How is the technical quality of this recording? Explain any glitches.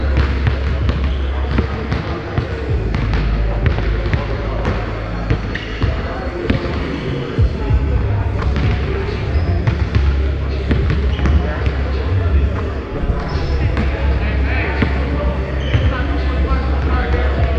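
No glitches or technical faults can be heard here.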